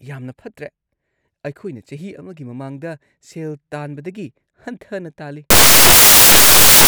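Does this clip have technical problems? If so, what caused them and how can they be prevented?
Yes: from 5.50 s to the end at 6.88 s, the speech turns into loud, harsh noise from samples built from the wrong bytes. Each sample's bytes are combined in the wrong order or offset, so the rapidly changing low bits become the large values. Unlike clipping or hiss, this is loud, harsh broadband noise rather than a distortion of the speech. Prevent it by declaring and checking byte order, sample width and alignment wherever raw audio is read or joined.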